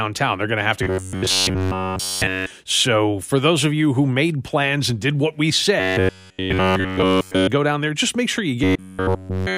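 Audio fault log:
0.83–2.51 s, 5.80–7.47 s and 8.64–9.57 s: robotic sound from repeated short buffers. The speech turns into a rigid metallic buzz at 93.8 Hz, likely from one segment of about 10.7 ms being looped across essentially each whole span. A spectrogram shows evenly spaced horizontal harmonic stripes, and the waveform shows one identical cycle repeating.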